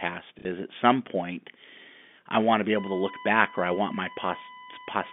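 Short bit of telephone-band speech, and you can hear the G.711 line limits, with everything sitting between about 200 Hz and 3.5 kHz. It has two problems. First, at 0.39 to 0.45 s, just before "is at some point", there's packet loss with the last packet repeated: about 60 ms went missing, which sounds like a couple of packets, and the receiver just replayed the last one it had to fill the gap. The repeats don't line up with the pitch, and you get a quick robotic stutter. Second, from 2.77 s, right after "I want to be", a USB whine comes in and runs to the end. It's a steady 1 kHz tone, roughly 20 dB under the speech. That pitch fits the 1 ms frame timing of a USB bus leaking in through the power or ground.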